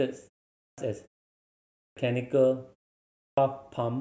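Clipped start after a pause occurs at 0.59 s, 1.79 s and 3.21 s. Each time the speech resumes after a pause (about 0.38 s, 0.8 s and 0.54 s long), the output device has gone idle and must wake before it passes sound. About 190 ms, 180 ms and 160 ms of speech are lost, so each phrase enters abruptly out of silence, missing its opening sounds.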